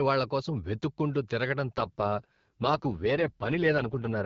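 At 1.77 s the AMR wideband (HD Voice) link takes an AMR rate drop that lasts to the end of the clip: the network appears to push the codec from its clear rate, which fits 12.65 kbit/s, down to a low mode consistent with about 6.6 kbit/s, so bits go to error protection instead of speech detail. The band and continuity hold, with no gap, but the speech turns rough, raspy and synthetic.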